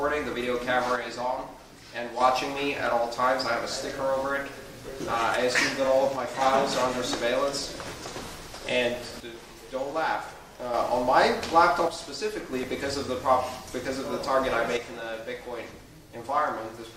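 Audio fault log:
0.96–2.21 s, 6.16–6.41 s, 9.20–10.74 s, 11.88–12.53 s and 14.77–16.97 s, one channel drops out: the level falls abruptly by about 6 dB, likely because one stereo side went silent before the mono sum. The waveform envelope halves in steps, and the spectrogram darkens evenly across all frequencies.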